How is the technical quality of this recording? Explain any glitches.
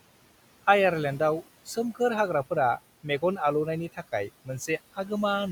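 Noise suppressor artifacts run through the whole speech clip. The suppressor estimates which frequency bands hold steady background noise and attenuates them frame by frame, cutting the noise by about 17 dB. The noise therefore drops away in pauses and comes back beneath speech. The underlying room noise sits about 19 dB below the voice.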